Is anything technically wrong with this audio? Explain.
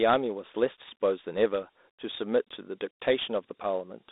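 Yes. Dialogic VOX ADPCM coding affects the whole speech clip. The codec stores each sample as a 4-bit step relative to a running prediction. That coarse quantisation leaves a gritty hiss that rides on the speech and is plainly audible. Nothing sounds above about 3.8 kHz, and the line band runs from roughly 250 Hz to 3.7 kHz. This points to 8 kHz sampling and fits a 32 kbps telephony rate. The result is thin, muffled and grainy.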